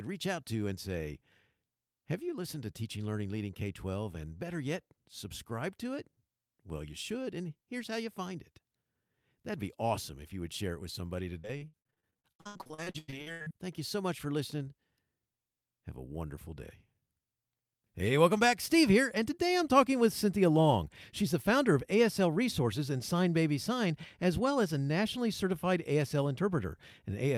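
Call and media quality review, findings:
Repeated packet loss (robotic sound), 11.39–13.52 s, after "share it with somebody": choppy speech, roughly half the stretch patched by the jitter buffer's concealment, gaps up to 95 ms.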